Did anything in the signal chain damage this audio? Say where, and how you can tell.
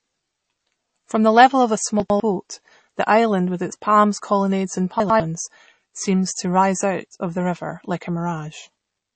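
Yes. The codec stage damaged the whole clip. Nothing sounds above 8.4 kHz, and the speech has a plainly audible watery, swirly texture. That points to MP3 compression, likely at a low bitrate around 32 kbps. Starved of bits, the encoder cut the treble and let weak frequency lines flicker.

Hard clipping occurs from 1.38 to 1.45 s. Peaks there were driven about 3 dB past the limit of a converter or sample-format stage. Their tops were sliced flat. That adds high harmonics, heard as a brief harsh crackle on the loudest moment.

Chunks out of order appear at 2.0 to 2.2 s and again at 5.0 to 5.2 s. Each spot holds two 100 ms blocks, with the first one played one block late. A network or buffer stage delivered it after its successor. Nothing is missing, but the sound jumbles at the joins.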